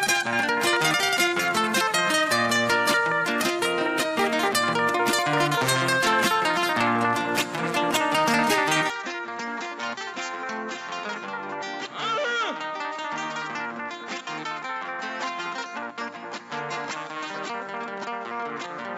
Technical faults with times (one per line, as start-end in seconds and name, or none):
8.90-18.98 input switched to a poorer device